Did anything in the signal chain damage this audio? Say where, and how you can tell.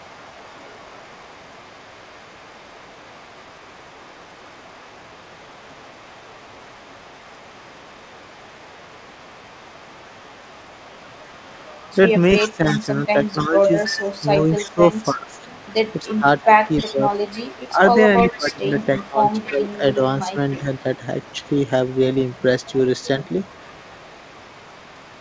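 Yes. At the call-processing stage, an echo leak runs through 0–11.22, 12.38–14.74, 15.29–15.65, 16.38–19.95 and 20.49 s to the end. A copy trails the speech by 306 ms and is strongest around 12.4–14.7 s. This is likely residual loudspeaker pickup the echo canceller failed to cancel.

Speech is also suppressed in double talk at 12.48–17.03, 17.69–17.81 and 18.37–20.86 s. During these stretches the level dips and parts break up: by about 10 dB at first, and by about 20 dB in the last stretch. The canceller, likely unable to separate talker from echo, attenuated both.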